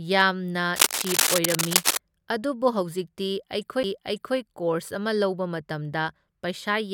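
From 0.76 to 1.97 s, dense, uneven scratching noise sits over the speech, a little louder than the speech itself. This is cable scratch noise. A worn cable, connector or control was likely being moved, so its contact resistance kept changing quickly.

At 3.83 s there is a CD skip. The laser jumped to another turn of the disc's spiral. The sound mutes for about 10 ms. It then resumes from a different point, just before "ꯀꯣꯔꯁ ꯑꯃ".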